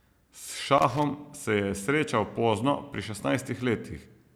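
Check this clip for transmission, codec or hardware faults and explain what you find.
There's one hardware fault here: a burst of loose connector crackle from about 0.78 to 1.03 s, roughly a quarter of a second. It sounds like an irregular scratchy rattle sitting on top of the speech. That's what you get when a worn or dirty contact keeps making and breaking as something shifts. The signal gets chopped on and off in rapid, uneven bursts, and any DC on the line turns each break into a little pop.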